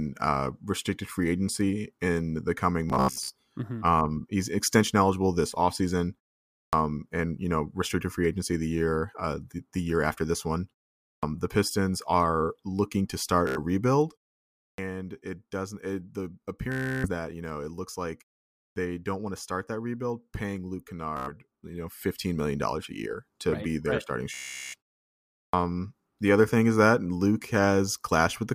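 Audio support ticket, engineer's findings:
Bluetooth stutter at 2.90–3.32 s, 13.47–13.58 s, 16.72–17.10 s, 21.17–21.31 s and 24.34–24.75 s. Short slices of speech repeat as a machine-gun buzz, then playback jumps ahead. About 90 to 400 ms is lost per event. At 2.90 s the repeats are scattered over about 0.4 s, with the longest unbroken run about 90 ms. The probable component is the wireless link: packets arrive late or not at all, and the receiver replays its last buffer.

Clipped start after a pause at 6.64 s, 11.13 s, 14.69 s, 18.66 s and 25.44 s. Speech starts abruptly and its onset is missing, roughly 90 to 100 ms each time, after silences of about 0.5 to 0.7 s. The probable component is the output device sleeping in silence and waking too slowly. There is no buzz or repetition, which separates it from the stutter. Here the wake-up arrives late.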